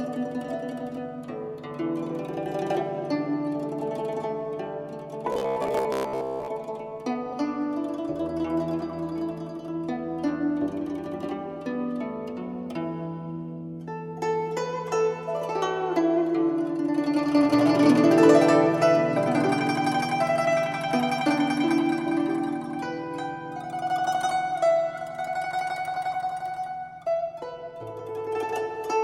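From 5.33 to 6.48 s the sound turns into a rigid, metallic buzz pitched near 66.7 Hz: robotic sound from repeated short buffers. Audio arriving too seldom was likely padded by looping roughly 15 ms chunks, so most of that stretch is repetition. Unlike a simple dropout, nothing goes silent; a steady buzz is imposed on the sound.

At 18.81 s compressed frames are skipped, and the audio jumps ahead by about 20 ms of material.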